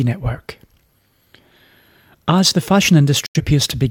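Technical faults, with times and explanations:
3.26–3.41 s, digital broadcast dropout: Just after "the fashion", the receiver stopped getting decodable frames and muted its output until valid ones arrived again. The speech ducks to silence over a fade of about 3 ms, so the cut sounds abrupt. About 85 ms of programme audio is missing, which fits roughly two lost frames. The speech resumes mid-stream rather than where it left off.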